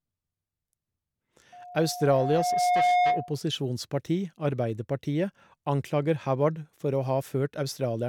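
Speech clip with loudspeaker feedback squeal from 1.52 to 3.39 s: a 717 Hz tone swells over roughly a second and a half, ending up a bit louder than the voice, because the mic's picking up its own speaker.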